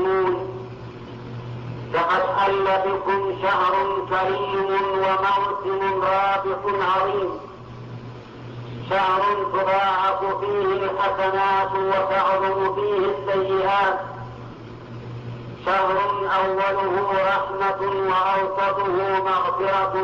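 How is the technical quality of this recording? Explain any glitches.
No glitches or technical faults are audible anywhere in the recording.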